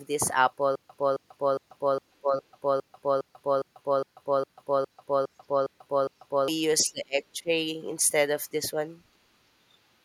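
From 0.75 s to 6.48 s the speech falls into a stutter with silent gaps. A fragment of about 268 ms repeats 14 times, each followed by about 141 ms of digital silence, every 409 ms. A stalled stream likely replayed its last fragment at each retry. The speech meant for that span is lost.

At 2.21 to 2.36 s, inside the stutter, the speech is suppressed in double talk. It dips by about 15 dB. An echo canceller likely mistook overlapping talk for echo and turned it down. From 6.81 to 7.5 s it happens again, deeper, about 25 dB. The speech is pushed down for roughly half a second.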